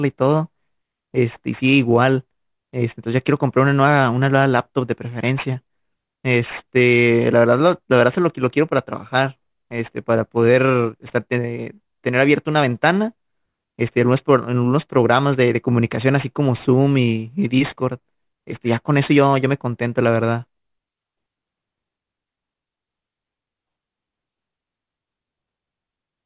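From start to finish the speech carries aliasing. The rate was cut down without a proper low-pass first, which fits a drop from 44.1 kHz to 8 kHz, so anything above 4 kHz got mirrored back below it onto unrelated frequencies. You hear it most on the sibilants, which come out gritty and metallic, with the folded junk sitting roughly 25 dB under the speech and the spectrum running hard right up to the 4 kHz edge.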